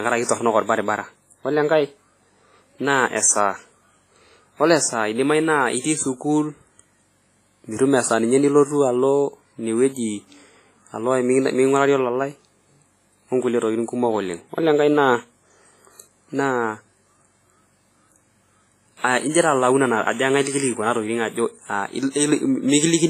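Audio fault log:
Throughout: WMA compression. The speech has a ringing, washy quality, with a hiss that swells and fades along with the voice, and nothing is heard above 15.4 kHz. The cause is likely a WMA transform encoder working at a low bitrate, the heavy damage pointing to something around 24 kbps. Its long blocks smear quantisation noise across tens of milliseconds, and quieter spectral detail is discarded entirely, which leaves the sound thin and swirly.
5.80–5.84 s and 19.31–19.35 s: pre-echo. Just before a sharp onset, a brief hiss appears, lasting 44 ms at the first spot and 32 ms at the second, and the attack itself lands softened rather than crisp. The attack falls late in a transform block, and the encoder spreads its quantisation noise evenly through that block. Noise scaled for the loud transient therefore also fills the silence ahead of it, where nothing masks it.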